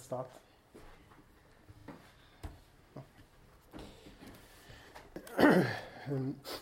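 At 1.8 s a repeated buffer occurs. Fresh audio failed to reach the output in time, so the device replayed its last block, heard three times in a row until 1.88 s. Each repeat has a hard join, giving a short stutter. The repeat length fits a 40 ms buffer, and roughly 70 ms of sound is skipped. At 5.12 s the same fault recurs with a single extra play, ending at 5.16 s and dropping about 40 ms.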